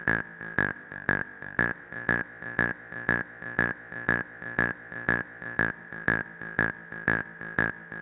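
Sound recording, no technical faults detected.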